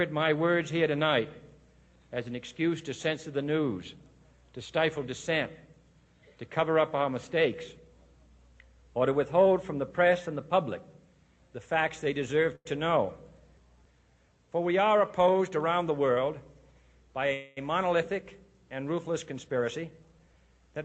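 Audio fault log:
12.55–12.67 s, short stall from a late packet: the last sound is held about 98 ms while the buffer waited, then resumes; the spectrogram shows a briefly smeared, repeated pattern.
15.27–16.24 s and 19.49–20.49 s, jitter buffer speed-up: audio runs 109% then 113% fast at unchanged pitch as pitch periods are trimmed, roughly 100 ms and 150 ms removed; the waveform shows compressed spacing.
17.33–17.59 s, call audio freeze: sound is stretched into a fading buzz for about 234 ms, likely from held-up packets emptying the buffer; the spectrogram shows flat, smeared bands, then normal resumption.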